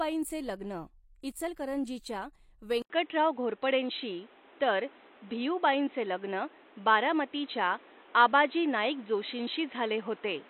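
At 2.82 s the sound drops out for 80 ms, then returns narrower and boxier through to the end, with a level shift of around 5 dB and new background noise sitting roughly 30 dB below the speech. The likely cause is an input switched to a poorer device. On a spectrogram, energy above 4 kHz vanishes abruptly after a thin blank column; the waveform shows the brief gap and a changed envelope height.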